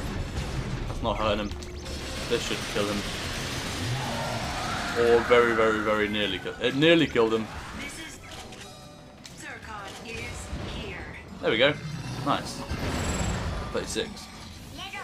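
No faults are audible anywhere in the recording.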